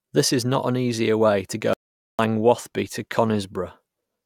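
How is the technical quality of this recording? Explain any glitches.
The recording has one clear glitch. From 1.73 to 2.19 s, right after "an easier way to", there is an audio dropout to silence. The signal most likely lost its input, and silence was written instead. About 0.45 s of speech vanishes into dead silence with no room tone.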